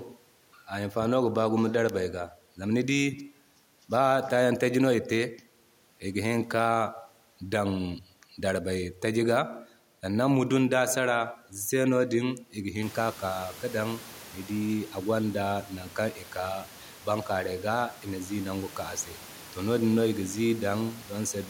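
Nothing in this speech recording points to a technical fault; the only change is the room's own background noise, which rises by about 18 dB around the 13-second mark and still sits about 23 dB below the speech.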